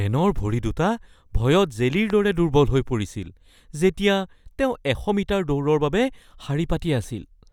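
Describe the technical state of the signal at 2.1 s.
At 2.10 to 2.12 s a single loud pop sits on top of the speech, peaking a few decibels above it while the speech continues underneath. It is likely a brief voltage pulse from a plug, switch, static discharge or driver glitch, shaped by the downstream circuitry into a sharp transient.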